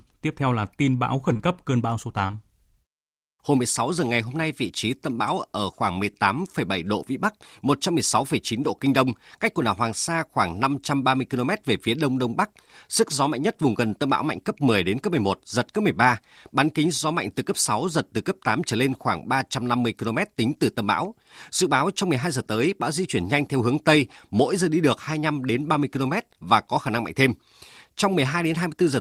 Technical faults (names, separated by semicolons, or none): short concealed packet loss